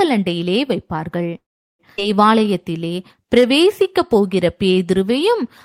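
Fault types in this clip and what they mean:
Call audio freeze: from 1.37 to 1.81 s the speech stops, with a brief tail of the last sound before about 0.38 s of silence, then resumes where it left off with nothing lost. This likely comes from packets being held up in transit until the jitter buffer ran dry.
Skip ahead: at about 1.97 s the speech jumps forward with almost no gap, losing roughly 0.3 s and butting the two sides together. A stretch of audio was discarded while later packets were already queued, so playback leapt past it.
Jitter buffer slow-down: from 2.32 to 5.43 s the speech plays at about 92% speed, same pitch, with stretched sounds. The receiver repeated single pitch periods and pause fragments, adding about 0.25 s to rebuild its buffer reserve.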